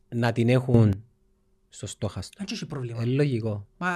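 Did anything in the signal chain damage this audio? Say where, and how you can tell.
Yes: a sudden gain jump from 0.74 to 0.93 s, where speech and background noise both rise about 11 dB, likely from an unramped digital gain step during processing.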